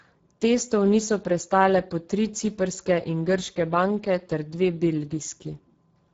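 From start to end, Speex codec damage makes the speech hoarse and noisy, pointing to a low bitrate near 10 kbps; the spectrogram shows smeared, noise-filled upper bands ending at 7.6 kHz.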